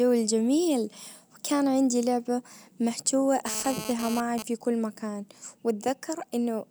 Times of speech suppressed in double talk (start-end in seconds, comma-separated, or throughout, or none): none